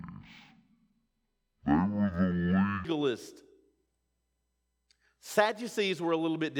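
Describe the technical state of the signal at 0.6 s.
At 0.6 s the speech is stereo read as mono (0.0 to 2.85 s): interleaved channels play as one, giving half speed, an octave drop, and a mirrored upper-spectrum image.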